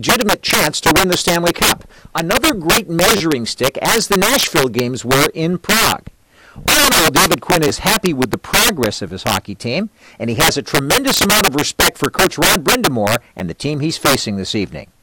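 Throughout the speech, integer overflow cracks every loud peak: the signal is driven about 12 dB too hot, so roughly one sample in twenty wraps to the opposite sign instead of limiting. The waveform shows peaks snapping from top rail to bottom, with broadband vertical streaks on a spectrogram.

A repeated buffer stutters at 3.17 s, 7.68 s and 13.39 s. The same 10 ms slice replays three, two, then one extra time, which fits a 10 ms buffer arriving late. Each is a click or brief buzz, seen as identical tiled waveform segments with hard seams.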